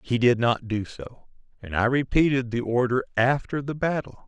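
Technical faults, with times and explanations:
No technical faults can be heard in this speech.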